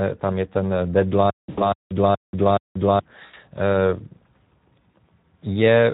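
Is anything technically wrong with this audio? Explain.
Yes, two things. The whole clip runs through the Speex codec at a setting that sounds like it's around 11 kbps, and there are three short dropouts from VoIP packet loss that the speech codec papers over.

The Speex codec damage is plainly audible from start to finish. At this fairly low setting, the CELP coder has very few bits left to describe the excitation signal that drives its vocal-tract filter. The speech comes out grainy and hoarse, because the fine detail of the source just isn't being carried.

The VoIP packet loss concealed by the speech codec shows up at 1.49–1.70 s, 3.25–3.35 s and around 4.92 s. In each case audio went missing and the decoder kept extrapolating from its last pitch and filter settings while turning the level down. The first two gaps each sound like roughly 80 ms lost, which fits four 20 ms frames. You hear a stretched, buzzy or noisy smear that fades, and the voice stays thin or warped for a bit after real audio resumes. 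The one at 4.92 s is a single-frame blip and much briefer.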